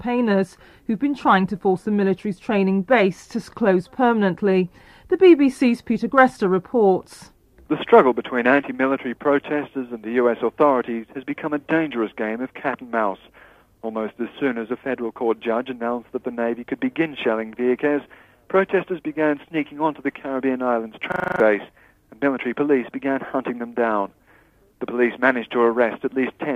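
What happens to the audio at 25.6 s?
Nothing goes wrong at 25.6 s; the audio plays through that moment intact, with no dropout, click or other fault.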